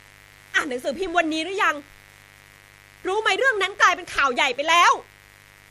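A mains buzz runs under the speech from start to finish. It sits at about 30 dB below the speech. Its base is 50 Hz, with a dense stack of harmonics climbing well into the kilohertz range. That points to sharp switching spikes leaking in twice per mains cycle, from a dimmer, a rectifier or a missing shield. The result is steady and raspy rather than a smooth hum. It never lets up.

The speech also shows generation loss throughout. It sounds swirly, smeared and hollow. Consonant attacks are blurred. The damage goes beyond what one pass of a codec at this quality would leave, which fits MP3 at 64 kbit/s. The likely cause is repeated decoding and re-encoding, perhaps four times. Each pass quantises on a shifted frame grid. Its noise and spectral holes stack on top of the last.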